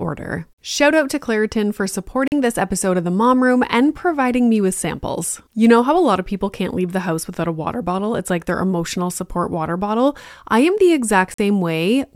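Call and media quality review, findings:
Two short silences, 2.28–2.32 s and 11.34–11.39 s, each about 44 ms, speech picks up further along as if it kept playing. Likely a Bluetooth dropout: late packets discarded at the headphones, gap size fits roughly three lost packets.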